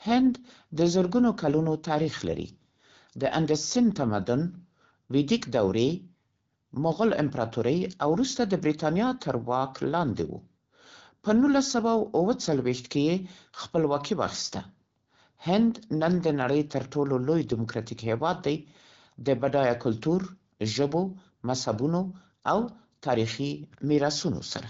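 Nothing goes wrong anywhere in this speech recording, which has the sound of an AMR wideband (HD Voice) link running at about 12.65 kbit/s, with only the light coding character you'd expect at that rate.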